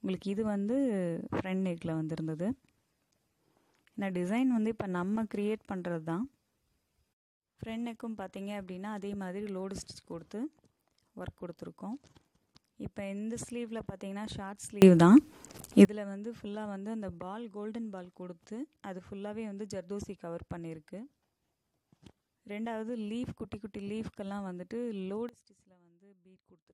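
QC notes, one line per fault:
14.82–15.85 s, sudden gain jump: level and background noise rise together by about 24 dB in a single step, likely a gain setting applied without a ramp.
25.29 s to end, sudden gain jump: sound and noise floor drop together by about 22 dB at once, with no fade, pointing to the same unramped change.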